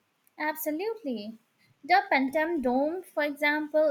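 Nothing stood out as a technical problem on listening to the speech.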